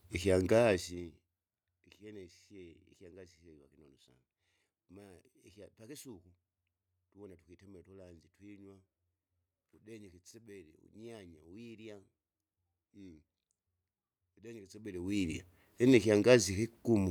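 Speech with zipper noise during two level moves, down by roughly 25 dB from 0.56 to 1.32 s and back up from 14.64 to 15.34 s. Unsmoothed gain steps of about 2 dB, roughly twenty a second, each click. The waveform envelope forms a staircase, and the spectrogram shows regularly spaced vertical lines.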